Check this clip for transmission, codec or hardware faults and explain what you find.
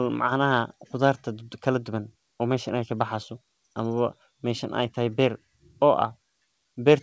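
Nothing goes wrong with the signal in this speech recording; it arrives over a call link whose content stops at 8 kHz, which fits a wideband codec such as G.722 running at 64 kbps.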